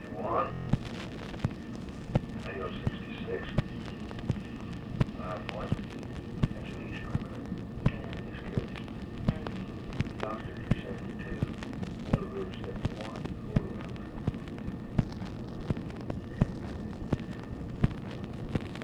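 Between 0.53 s and 0.67 s the audio hits a system hang loop. One 23.22 ms slice repeats exactly six times, producing a brief mechanical buzz at about 43.1 Hz instead of moving forward. The slice length fits a 1024-sample ring buffer, and the buzz comes from the playback hardware re-reading that buffer while the host or driver stalled. Once the system recovers, the audio resumes with essentially nothing skipped.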